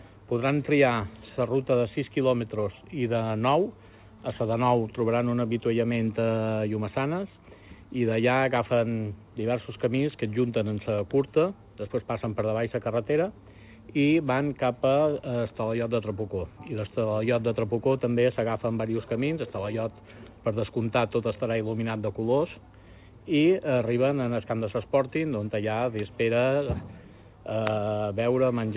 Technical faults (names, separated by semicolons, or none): none